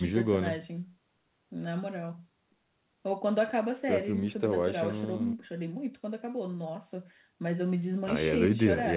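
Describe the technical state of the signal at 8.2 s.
At 8.2 s the speech is intact, with no dropout, glitch or other fault, and it carries the narrow telephone-band sound of the call path, with nothing above 4 kHz.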